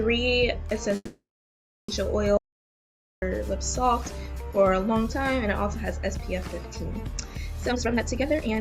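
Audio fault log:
0.95–1.90 s, call audio freeze: The sound stalls, with its last moment stretched into a brief buzzing or hissing tail that fades out and leaves about 0.7 s of silence. It then picks up exactly where it stopped, so nothing is skipped, but the rest of the clip now runs about 0.93 s later. This likely comes from packets held up in transit, which emptied the jitter buffer and left the receiver with nothing to play but a fading extension of the last sound.
2.37–3.22 s, audio dropout to silence: The sound cuts off abruptly and returns abruptly, with a hole of about 0.85 s that is completely dead, with no room tone or background. The audio does not resume from where it stopped, so whatever occurred in that stretch is simply absent. This likely comes from the input being lost for a moment, for example a disconnected device, a failed link or an accidental mute, while the recorder kept writing silence.
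7.64–8.59 s, jitter buffer speed-up: The final second sounds rushed, running at roughly 168% of normal pace while the pitch stays the same, which gives a clipped, hurried quality. The receiver found its buffer holding far more audio than it wanted, as happens when delayed packets arrive in a burst. To close the gap it repeatedly cut out tiny pitch-period-length slices, shedding about 0.7 s of material to bring the delay back down.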